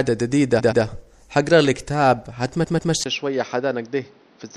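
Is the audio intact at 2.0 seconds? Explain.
No. At 2.0 seconds the speech has the watery, swirling quality heard across the whole clip, with smeared attacks and chirpy s sounds. The likely cause is MP3 compression, which fits a 64 kbps encode. Short of bits, the encoder zeroes weak frequency lines that flicker between frames.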